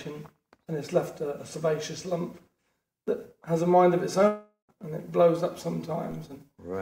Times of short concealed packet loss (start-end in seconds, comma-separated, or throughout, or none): none